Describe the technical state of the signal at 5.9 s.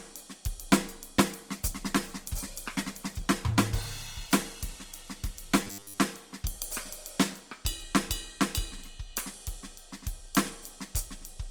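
At 5.9 s the music sounds muffled and coarse, its treble dulled. This is a call bitrate drop lasting from 1.19 to 7.91 s. The encoder's budget fell from 48 to 18 kbps, so it codes more roughly and trims high frequencies, holding its lowest rate for about 3.9 s.

Over that, a rigid metallic buzz near 100 Hz sits on the music from 5.64 to 5.98 s. This is robotic sound from repeated short buffers, likely caused by a 10 ms chunk of audio being replayed whenever fresh audio arrives late. Most of the real signal in that window is skipped.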